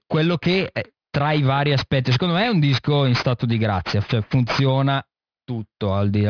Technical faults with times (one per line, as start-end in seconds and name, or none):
0.00-6.29 aliasing